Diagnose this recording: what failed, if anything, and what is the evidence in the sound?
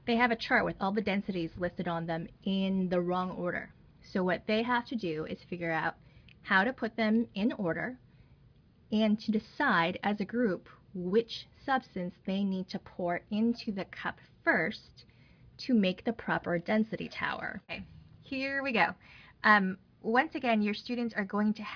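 Nothing failed in this recording.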